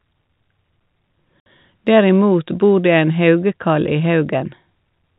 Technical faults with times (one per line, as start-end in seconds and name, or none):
1.40-1.46 packet loss filled with silence